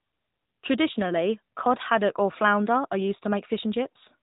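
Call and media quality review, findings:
AMR narrowband mobile codec in the path for the whole clip. Speech is resampled to telephone bandwidth: nothing above 3.8 kHz, so sibilants are dulled. The pulse-excited vocal-tract model adds a plainly audible buzzy, synthetic edge, which fits a mid-rate mode around 10.2 kbps.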